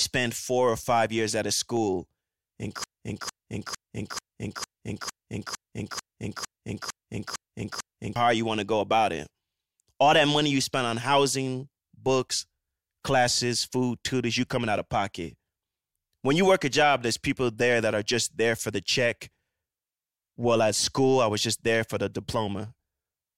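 A broken-record loop runs from 2.84 to 8.16 s: a fragment of about 0.45 s repeats exactly, back to back, twelve times, likely because the stream stalled and kept replaying its last held piece. The speech meant for that span is lost, resuming at "hard you want to".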